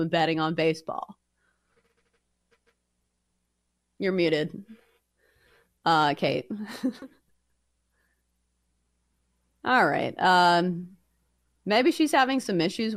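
From 0.13 s to the end, a faint, steady rattle of tiny ticks, roughly every 40 ms, rides under the speech. These are clock slip clicks, likely from two unsynchronised devices whose clocks differ by around 500 ppm, forcing a single sample to be dropped or repeated hundreds of times.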